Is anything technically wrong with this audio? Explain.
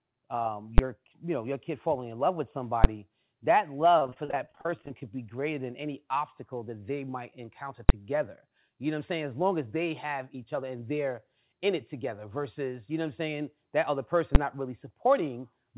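Yes. There are two kinds of fault in this speech clip.

Invalid numbers at full scale occur at 0.78 s, 2.84 s, 7.89 s and 14.35 s. At each point a calculation produced infinite or invalid values, which were forced to the largest value the signal can hold for a block of about 10 ms. Because that block is so short, each event is heard as a single sharp, very loud bang cutting through the speech.

Repeated packet loss (robotic sound) runs from 3.99 s to 5.02 s. Over that second, more than twenty holes opened in the incoming stream, the longest about 35 ms. Each hole was patched by extending the previous sound, adding about 351 ms of filler, and about 290 ms of real audio is gone, so roughly a third of the stretch is concealment. The speech there sounds choppy, with pieces dropped out.

The call path carries nothing above 4 kHz, which fits a 64 kbps G.711 mu-law codec.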